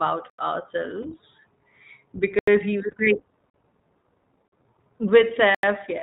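iLBC codec coding runs through the whole clip: this narrowband VoIP codec, here at 15.2 kbps in 20 ms frames, codes each frame's excitation independently and discards everything above 4 kHz. The result is dull, band-limited speech with a plainly audible rough, synthetic edge.

A block of digital silence first appears at 0.30 s. For 85 ms the output drops to zeros with no fade, which fits a 4096-sample block the program failed to fill in time. It is heard as a short hole.

Lost iLBC frames follow at 1.02 s, where a single 20 ms frame went missing. The decoder filled it by repeating the last pitch cycle mixed with noise, giving a brief held, buzzy vowel-like smear before the voice snaps back.

The second block of digital silence, at 2.39 s, is another 85 ms dropout.

From 2.87 to 3.08 s, four more iLBC frames are lost, 80 ms in total, scattered across about 200 ms. Each loss is roughly a single frame, so the speech flickers through several short buzzy patches rather than one long held sound.

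Further blocks of digital silence occur at 3.50 s and 4.48 s. These are shorter, 43 ms each, which fits 2048-sample blocks, and they sound like short holes. The last, at 5.55 s, is again an 85 ms hole.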